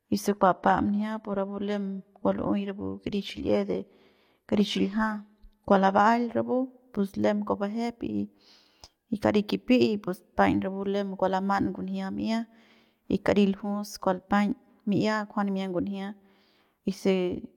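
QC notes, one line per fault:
0.0–6.0 s, adaptive stream starting at a low bitrate. Treble sounds synthetic and artefacts are stronger, which fits 24 kbit/s HE-AAC. Quality then jumps without a gap, which fits 96 kbit/s AAC-LC.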